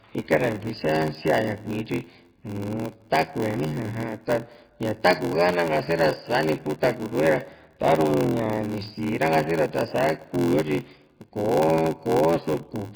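Throughout, the speech has a watery, swirling texture with smeared consonants. That points to heavy MP3 compression, likely at a very low bitrate around 16 kbps.

Also throughout, a steady 86.1 Hz buzz of tiny silent gaps runs under everything, and the speech plays at 0.861 times normal speed with its timbre unchanged. This is a block size mismatch (padded), fitting 512-sample reads only partly filled. Unlike a resampling error, the speed drops while the timbre stays.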